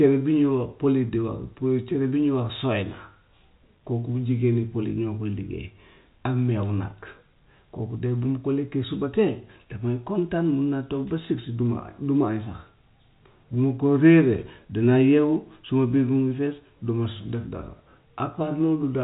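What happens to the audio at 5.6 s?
Nothing goes wrong at 5.6 s: the speech carries on intact there, with the narrow telephone-band sound of G.711 coding, which lets nothing through above about 3.8 kHz.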